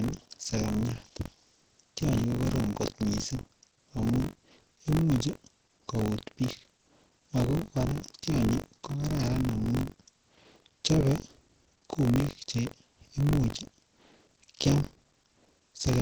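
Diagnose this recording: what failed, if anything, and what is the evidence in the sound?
Opus voice compression runs through the whole recording, at the codec stage. The speech is muffled, hoarse and faintly robotic, and there is nothing above 8 kHz. That points to Opus in its SILK linear-prediction mode at a low bitrate, around 10 kbps, with the band held to wideband. At that rate the excitation is coded coarsely in 20 ms frames, so the voice loses its breathiness and texture and takes on a synthetic roughness.

Buffer tearing is also present throughout, at the driver or buffer stage. A steady robotic buzz at 46.9 Hz rides on the speech and appears only where there is signal. That rate fits a 1024-sample buffer. The writing and reading positions have slipped so they cross inside every period. Roughly 15 percent of each buffer replays audio from about 40 ms earlier, with a hard splice at each edge, and that repeated discontinuity is the buzz.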